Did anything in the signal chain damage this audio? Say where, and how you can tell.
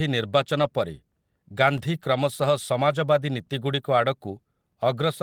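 Yes. At the network stage, packets went missing and the Opus decoder filled them using in-band forward error correction: a lost packet rebuilt from error correction. There is no dropout. Instead, the speech turns briefly rougher and noisier for about 40 ms between 0.59 and 0.65 s, which fits two lost 20 ms packets. It happens again for 20 ms at 2.91 to 2.93 s, consistent with a single packet. The rebuilt frames come from a low-bitrate copy carried in the following packet, so they lack the detail of the originals.

At the driver or buffer stage, a block of digital silence appears at 1.78 s. For about 1.3 ms, which fits a 64-sample block, the output drops straight to silence and then jumps back with no fade. Both hard edges produce a discontinuity, heard as a short tick. This points to the output buffer not being filled in time, so zeros were played in place of the missing samples.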